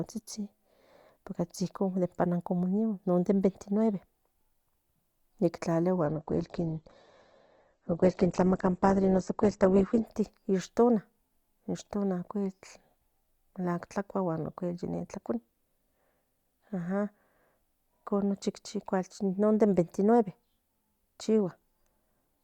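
A speech recording carried over an adaptive stream that dropped to a lower bitrate between 6.05 and 10.05 s, most likely after the connection slowed and the player switched to a leaner encoding. For those four seconds the treble is cut off, with nothing above about 8.3 kHz, and the sound turns thinner with rising codec artefacts, consistent with an Opus stream falling from around 64 to around 12 kbit/s. Quality changes abruptly at both ends, without any gap.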